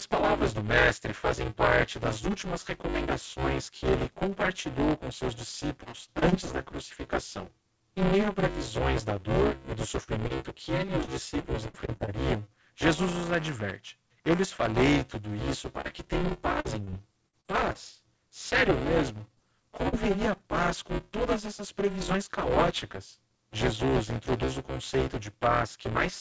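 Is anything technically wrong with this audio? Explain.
Yes. Three kinds of fault affect this speech, which has passed through a wideband call path with nothing above 8 kHz, as a G.722-type codec at 64 kbps would produce.

Buffer tearing runs throughout. The writer and reader of the playback ring buffer have drifted, so most of each period, roughly two-thirds or more, replays audio about 10 ms old, with hard joins either side. This produces a steady 200 Hz robotic buzz, heard only while speech is present, which fits a 5 ms buffer period.

Repeated packet loss (robotic sound) occurs at 5.84–6.52 s, 11.04–12.09 s and 15.81–17.76 s. Packets repeatedly went missing, in gaps up to about 60 ms long, and each hole was filled by extending the last sound. The concealment covers about 13–17% of each stretch, leaving choppy, metallic speech with fragments gone.

Short concealed packet loss occurs at 10.04–10.09 s, 10.27–10.32 s, 19.34–19.39 s and 19.89–19.94 s. 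Each is a 20–40 ms hole the decoder patched by continuing the preceding sound before blending back into the real audio. Each is heard as a brief smear or wobble, and a short consonant may drop out.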